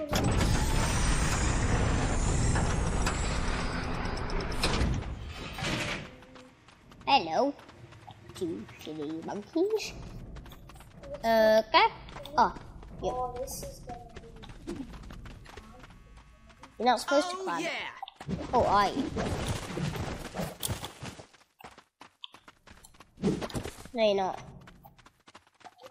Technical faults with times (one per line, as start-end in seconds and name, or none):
none